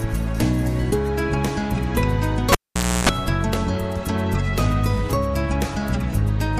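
A cable pulled and plugged in interrupts the audio from 2.52 to 3.09 s. A pop marks the jack leaving the socket, and the sound falls to near silence for about 520 ms, during which a 60 Hz mains buzz lasting about 310 ms takes over while only the plug's tip makes contact, and a second pop arrives as the connection seats and the audio resumes. That pop, buzz, pop pattern separates it from a digital dropout, which is a clean gap with no hum.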